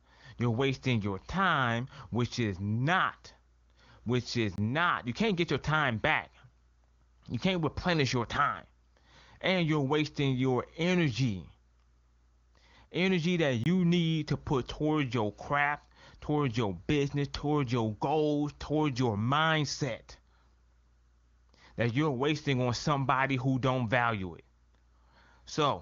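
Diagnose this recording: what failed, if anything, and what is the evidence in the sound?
Speech cuts to a block of digital silence twice, a driver or buffer failure. Gaps run 4.56 to 4.58 s, after "which is", and 13.64 to 13.66 s, before "need to put towards". Each lasts 23.2 ms, which fits an unfilled 1024-sample buffer.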